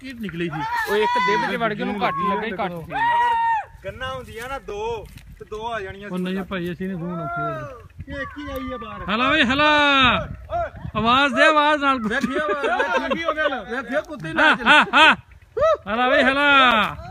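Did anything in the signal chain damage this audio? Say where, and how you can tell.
Yes. There is a gap between chunks at 4.70, 10.70 and 16.71 s. Each is a hard-edged hole of 6.5 ms, spaced exactly 6.0 s apart. That fixed spacing points to the chunked storage or playback stage, where silence was inserted at each join without removing any audio.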